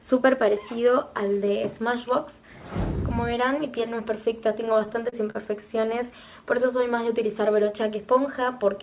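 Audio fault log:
4.66–5.70 s, repeated stalls (stutter): the sound catches and drags about ten times in quick succession, each hitch a brief smear where the last sound is held on, the longest around 42 ms. Packets arrived late or slower than playback, so the jitter buffer kept running dry and the receiver stretched what it had, about 143 ms in all, roughly a seventh of the span. Nothing is lost, only delayed, beneath the 4 kHz ceiling of the G.711 call path.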